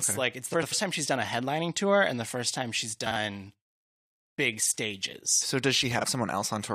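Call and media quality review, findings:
Frames out of order in speech at 0.53–0.73 s (after "okay like it's", before "time she's done"), 3.06–3.16 s (after "the first time she's"), 4.61–4.72 s and 5.99–6.05 s. Two adjacent blocks (about 93, 46, 46 and 23 ms) play swapped, giving a garbled flutter and no lost time. Waveform and spectrogram show formant tracks that jump backward. Probable component: jitter buffer or packet reordering, with block lengths pointing to 23 ms frames.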